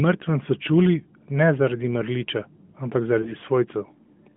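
At 3.22 to 3.33 s there is a lost AMR speech frame, which fits a single 20 ms frame failing its checksum. The decoder repeats its last pitch and vocal-tract settings at reduced gain, giving a brief warble or dip rather than the hard silent gap or click of a plain dropout, inside the 150 Hz to 3.5 kHz narrowband line.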